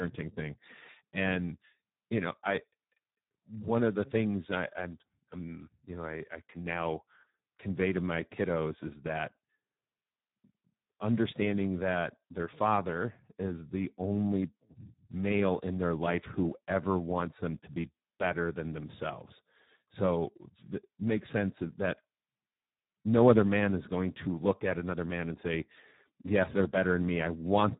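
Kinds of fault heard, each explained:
Speex codec: A low-rate CELP speech codec compresses this speech heavily throughout. The damage points to a setting near 8 kbps. Too few bits are left for the excitation, so the speech sounds hoarse, noisy and rough. Nothing remains above 3.9 kHz.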